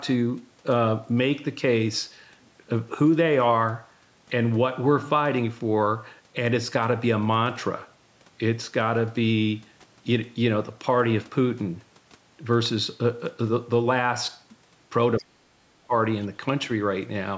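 At 15.17 s there's a short scrap of the other side's voice leaking through, lasting until about 15.24 s. It's faint, roughly 25 dB under the talker, so it's more of a ghostly blip than a clear second voice. The likely cause is the talker's loudspeaker feeding back into their mic, with the echo canceller not quite scrubbing out that bit of far-end sound before it went up the line.

Right on top of that, from 15.19 s to 15.93 s, the talker's own speech gets suppressed in double talk. With both sides going at once, the canceller most likely couldn't tell the local voice from the echo, so it clamped down on everything. You hear the talker sink hard, dropping by something like 40 dB at the worst point, and most of that roughly three-quarter-second stretch sounds gouged out or choppy before the voice comes back up to normal level.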